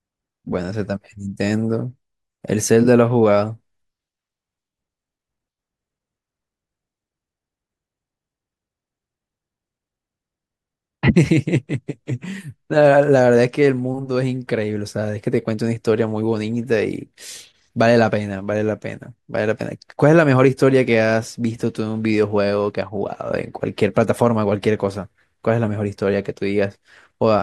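Nothing stood out as a technical problem on listening to this speech recording.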